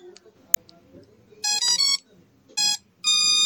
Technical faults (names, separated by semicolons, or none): MP3 compression; damaged data in a compressed stream